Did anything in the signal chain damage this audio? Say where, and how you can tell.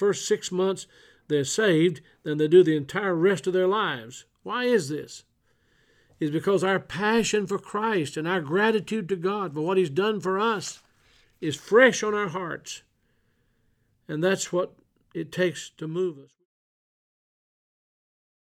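No, nothing in the signal chain damaged this audio; the only change is a smooth fade-out from around 15.5 s to 16.46 s.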